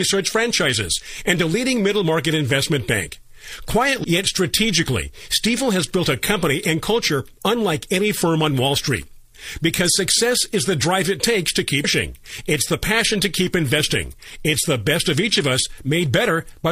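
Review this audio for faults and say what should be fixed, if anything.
There are two short glitches from damaged data in the compressed stream. The first is at about 4.00 to 4.05 s, right before "yet strategically", and the second is at 11.80 to 11.85 s, just after "drive it takes to". Each one is brief. It happens when corrupted bytes make the decoder misread those frames and lose sync until it finds a clean frame header again. To prevent it, verify file or stream integrity with checksums and re-fetch any bad segments.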